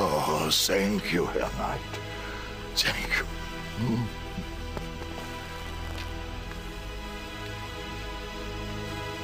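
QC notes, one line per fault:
5.19–6.13 s, buffer tearing: write and read pointers crossed inside every period, splicing in a brief sliver of older audio between hard joins, producing an 86.1 Hz robotic rattle, which fits a 512-sample buffer.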